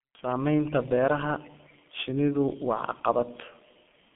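From start to finish, the speech carries heavy G.723.1 codec damage. The sound points to this early internet-telephony coder running at about 6.3 kbit/s. It works in 30 ms frames and rebuilds the voice from a model that updates slowly. Nothing survives above 3.4 kHz, and the low end stops near 150 Hz. The result is muffled and hoarse. Consonants smear together and lose their edges.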